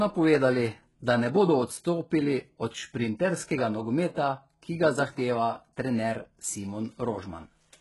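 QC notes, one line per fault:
Throughout: HE-AAC compression, likely. Nothing above 11.5 kHz, and the s sounds come across gritty and lispy. The upper band is copied up from lower frequencies rather than coded, so harmonics don't line up. Heavy damage, which fits roughly 12 kbps.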